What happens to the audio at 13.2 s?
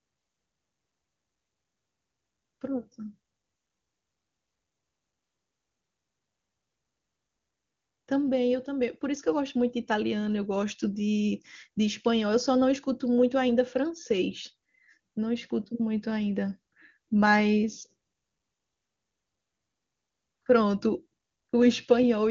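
At 13.2 s the speech carries on intact, with nothing breaking into it, and the AMR wideband (HD Voice) coding that limits the band to about 7.1 kHz leaves no audible roughness there.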